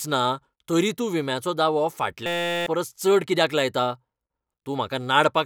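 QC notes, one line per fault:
2.26–2.66 s, system hang loop: after "तरी तूं विम्याचो दावो" a 5.8 ms slice repeats exactly until "चड कित्याक लायता", giving a steady 172 Hz buzz. The host stalled while the hardware kept cycling its ring buffer, which fits a 256-sample buffer. Roughly 0.4 s of audio is lost.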